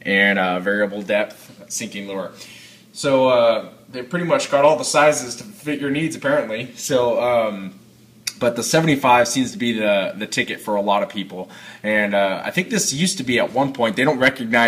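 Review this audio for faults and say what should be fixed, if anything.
Hard clipping shows up at the very end, from 14.02 to 14.67 s. The level there runs about 6 dB past what the chain can pass, so the peaks get sliced flat, adding harmonics far up the spectrum. To prevent it, leave more headroom before the stage that overloads.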